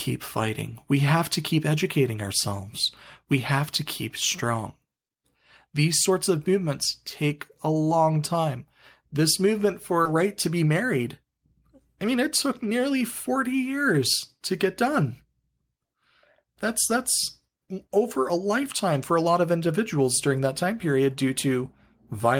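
It's a speech clip with a skip ahead at about 10.05 to 10.07 s: roughly a second of audio was dropped, either in transit or by an overflowing jitter buffer with later audio already queued. Playback lurches forward with no gap, and the two sides are butted straight together. Right after, from 10.15 to 11.54 s, there's a jitter buffer speed-up. The buffer was holding too much, so it trimmed short pitch-period slices repeatedly, running about 6% fast at unchanged pitch and shaving around a tenth of a second, which sounds slightly hurried.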